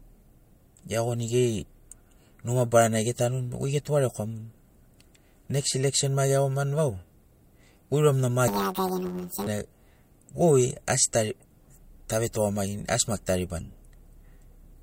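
From 8.48 to 9.48 s, planar audio is read as interleaved: each 10.67 ms block stores all left samples then all right, but playback treats them as alternating pairs. Each block replays twice at double speed, so the speech turns to a robotic buzz near 94 Hz.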